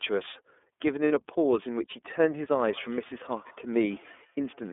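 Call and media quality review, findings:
iLBC codec, throughout. Band limited to roughly 250 Hz to 3.5 kHz, narrowband telephone sound. Speech rough, slightly synthetic. Coding damage plainly audible. Consistent with 13.33 kbps iLBC at 30 ms frames, each frame coded independently of the last.

Lost iLBC frames, 1.08 to 1.11 s. Brief buzzy held-vowel smear, 30 ms. Points to one dropped packet. Decoder concealment repeated the last pitch cycle with added noise. Recovery immediate, since iLBC frames stand alone.

Feedback echo between two devices, 2.7 s to end. Faint repeat of speech at about 150 ms spacing, about 27 dB below the speech. A second device on the call is replaying the far microphone into the room. The echo canceller cannot remove it.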